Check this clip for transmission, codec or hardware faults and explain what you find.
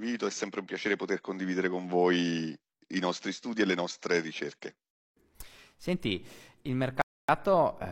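One fault is present, a rebuffering stall from 7.02 to 7.29 s. The player ran out of downloaded audio and waited for more. The speech drops to silence for about 0.27 s, then resumes exactly where it stopped. Nothing is lost, only time is added.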